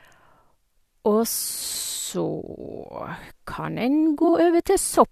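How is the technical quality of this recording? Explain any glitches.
Two brief glitches in this speech, both frames out of order. At 2.96–3.02 s and 4.23–4.33 s, adjacent blocks of about 23 ms and 46 ms play swapped, giving a garbled flutter but no lost time.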